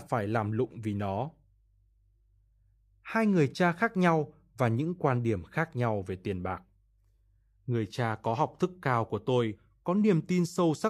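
Speech, with nothing technically wrong in it.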